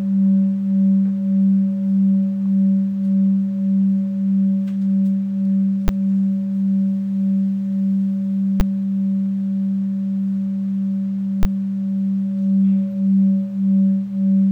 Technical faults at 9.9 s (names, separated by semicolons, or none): none